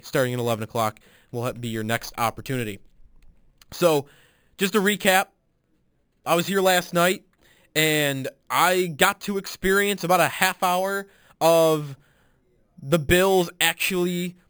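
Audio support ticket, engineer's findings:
Imaging from sample-and-hold upsampling, throughout the speech. Bright metallic fizz, about 14 dB under the voice, first image band 5.5 to 11 kHz. Points to an 11 kHz source raised to 44.1 kHz by repeating samples, no smoothing filter. Distinct from hiss: fizz vanishes in pauses, tracks voice level. Distinct from plain brightness: fizz moves opposite to voice pitch, with copies repeating around each multiple of 11 kHz.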